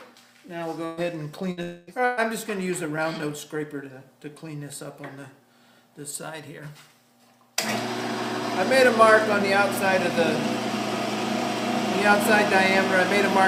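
Early on there's a cluster of network trouble in the audio. Three bursts of packet loss hit at 0.85–1.00 s, 1.51–1.60 s and 2.05–2.20 s. Each time the receiver stretches the last bit of sound into a fading buzz or hiss for about 120 ms, 60 ms and 120 ms, then jumps ahead past the lost chunk. Right after the second burst, from 1.63 to 1.90 s, there's a longer gap of about 240 ms. It's all filled with that same decaying concealment sound, with no dead silence, before the audio picks up further on. A long network dropout is the likely cause there.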